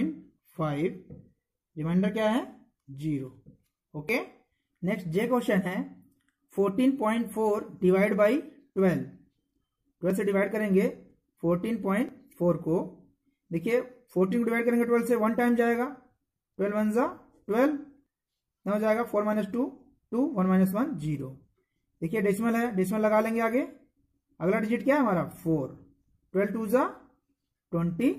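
Brief skips occur at 4.09, 10.10, 12.09, 18.06 and 26.04 s, where the waveform jumps. This is overlap between stream segments: neighbouring 2.0 s segments carry overlapping time stamps, so the player trims the overlap from audio that was never duplicated. Between 22 and 43 ms of real sound is lost at each point, the longest at 26.04 s. Every skip falls near a 2 s segment boundary.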